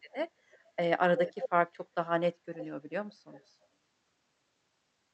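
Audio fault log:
0.11–0.15 s, 0.51–0.65 s, 1.17–1.49 s, 2.58–2.67 s, 3.31–3.54 s: echo leak. A far-end echo canceller likely let loudspeaker pickup through, so delayed copies trail the speech by about 0.31–0.32 s, mostly faint but nearly full level around 1.2–1.5 s.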